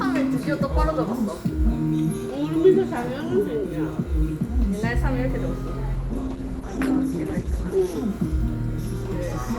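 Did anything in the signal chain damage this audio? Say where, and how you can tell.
Yes, at the network and codec stage: an adaptive stream at a lower bitrate from 5.95 to 7.95 s. The treble suddenly collapses, with nothing left above about 12.2 kHz, and the sound takes on a thinner, more smeared texture, then snaps back just as abruptly, with no gap either side. That's the player dropping to a cheaper rendition while the connection struggled, and the roll-off fits something like Opus sliding from around 64 kbit/s down to about 16 kbit/s.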